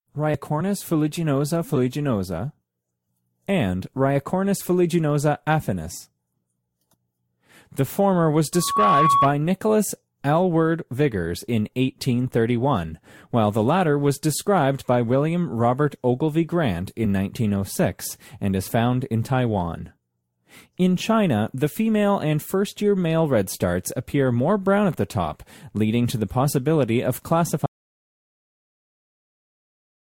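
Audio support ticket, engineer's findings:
Loudspeaker feedback squeal, 8.53 to 9.30 s: 1.1 kHz tone swelling over about a third of a second to about 5 dB above the speech. Mic-to-speaker loop gain above unity at that frequency.

Audio dropout to silence, 27.66 s to end: speech cuts to silence, no room tone. Likely input lost (device disconnect, link failure or mute) while recording continued.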